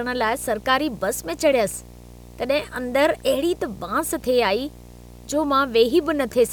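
Video or display buzz runs through the whole speech clip: a screen or video cable couples its 60 Hz field rate into the audio, sitting roughly 20 dB below the voice with hash above.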